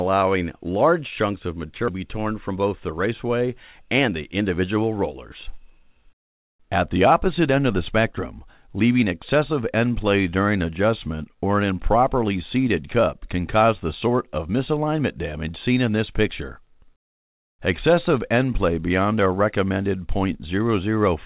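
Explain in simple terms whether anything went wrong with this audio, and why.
Skip ahead, at about 1.9 s: the sound suddenly jumps forward, and close to half a second of audio simply never plays. That stretch was dropped while later audio was already waiting, so the two sides were joined almost directly, with no silence or filler in the gap. You hear an abrupt cut where something seems to be missing, because it is.

Jitter buffer speed-up, from 2.50 to 3.08 s and again from 3.89 to 4.61 s: in both stretches the sound plays slightly fast, about 8% faster in the first and 7% in the second, while the pitch stays the same. The receiver had built up more waiting audio than it wanted, so it trimmed many tiny slices, each just one or a few vibration cycles long, to catch up. Each stretch loses roughly a twentieth of a second, which makes it sound a little hurried. All of this comes through a phone-style call link that carries nothing above 4 kHz, so the sound is narrow and lacks its highest tones.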